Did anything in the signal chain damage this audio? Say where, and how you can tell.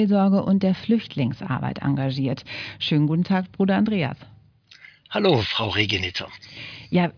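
No, nothing in the signal chain damaged this audio.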